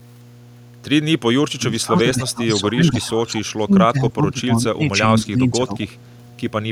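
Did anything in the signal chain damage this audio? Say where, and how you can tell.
Yes. In the analogue wiring there's mains hum running under the whole clip: a steady 60 Hz tone sitting about 20 dB below the speech. That's the power line getting coupled into the signal, from a ground loop or a nearby transformer, before it ever reached the converter.

In call processing, the speech is suppressed in double talk in three stretches: 1.29 to 1.65 s (dropping as far as about 40 dB), 1.86 to 3.4 s (about 20 dB) and 3.56 to 5.82 s (about 25 dB). That's likely the echo canceller losing track while both ends talked and ducking the near talker along with the echo.

There's also echo leak from the same call stage, at 1.71 to 2.01 s and again briefly around 3.36 to 3.42 s. It's a delayed copy of the speech, 214 ms late and about 20 dB down. That's likely the far end's loudspeaker pickup slipping past its echo canceller and coming back down the line.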